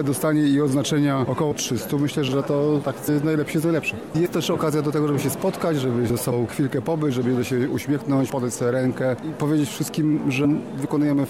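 Compressed frames skipped: whole frames never reach the output, either missing from the stream or rejected by the decoder as damaged, so playback leaps forward. It happens at 1.51, 3.07, 4.25, 6.31 and 10.44 s, losing about 50, 70, 70, 100 and 70 ms. Those gaps fit runs of two to four frames of 26.1 ms. Overlap between neighbouring frames blurs each join into a short smeared blip rather than a sharp click.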